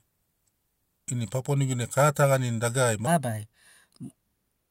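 From 3.07 s to the end, a section at the wrong speed plays 1.23 times fast. Speech rises about four semitones and hurries. A wrong clock setting is the likely cause.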